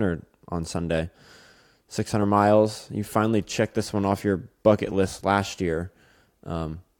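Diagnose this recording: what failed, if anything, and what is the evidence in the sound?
Nothing in the recording points to a failure at any stage of the chain. The speech arrives intact, with no event in the sound that would call for a diagnosis.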